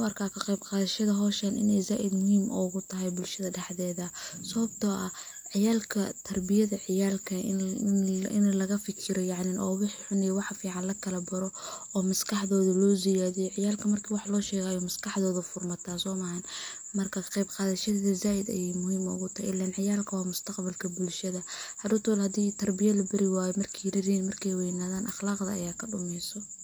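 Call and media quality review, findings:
No audible faults found in the speech recording; nothing to raise against capture, transport or playback.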